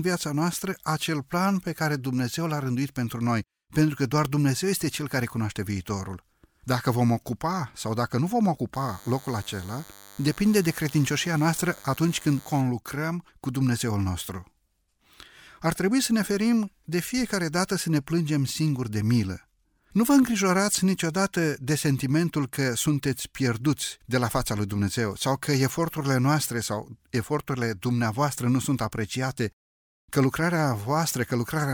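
A speech recording with DECT cordless phone buzz from 8.74 s to 12.61 s. A thin, steady buzz sits under the speech for those four seconds. It is pitched at 100 Hz and rich in harmonics, which gives it a harsh, raspy edge. It stays about 25 dB below the speech. The cause is a nearby DECT handset or base sending a radio burst every 10 ms. The audio circuitry rectifies these bursts into sound.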